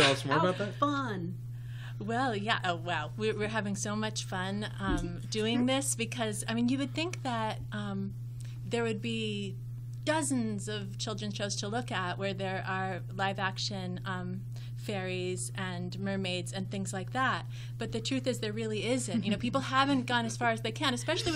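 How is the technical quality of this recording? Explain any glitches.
The technical quality of the recording holds up, with no glitches to explain.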